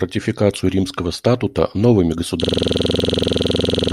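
At 2.44 s the speech locks into a system hang loop that runs to the end: the system froze while the hardware kept replaying one 46 ms chunk, about 34 times, giving a rough 21.5 Hz stutter-buzz, which fits a 2048-sample buffer.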